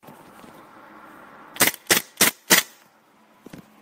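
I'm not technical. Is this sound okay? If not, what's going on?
Yes, nothing about this sound stood out as a problem on listening.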